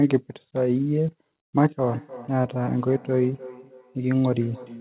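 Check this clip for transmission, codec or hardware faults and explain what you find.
One fault is present: feedback echo between two devices. From 1.88 s to the end, the speech comes back roughly every third of a second. Two devices on the call share a room. One plays the other's audio, and that microphone picks it up again. Neither echo canceller removes the other device's playback. The repeats peak about 18 dB below the speech.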